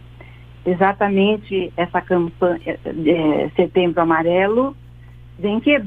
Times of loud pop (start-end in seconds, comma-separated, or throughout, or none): none